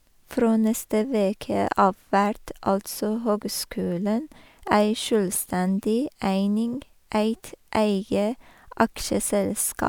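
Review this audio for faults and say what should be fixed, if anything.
I found no faults in this audio, so nothing needs to be fixed.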